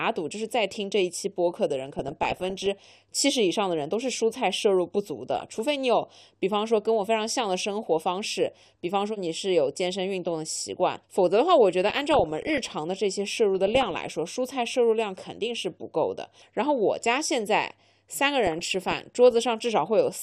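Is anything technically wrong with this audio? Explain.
Yes, there are two faults. Throughout the clip the speech sounds dull and muffled, with a gurgling, grainy roughness on the voice and treble that seems to flicker in and out. This is likely MP2 compression at a low bitrate, around 80 kbps by the sound of it. Layer II splits the signal into 32 sub-bands and gives each only a share of the available bits. Starved upper bands switch off, and the remaining bands are coarsely quantised.

On top of that there are bursts of DAB burbling at 1.99–2.66 s, 5.36–5.59 s, 11.87–12.58 s, 13.58–14.08 s and 18.46–19.45 s. Each brings short blips of noise in single sub-bands over the speech. Bit errors, at a rate well under one percent, slipped past error correction into the MP2 stream. Corrupted samples put short noise blips into individual sub-bands, and corrupted scale factors make sub-bands leap in level for up to a frame.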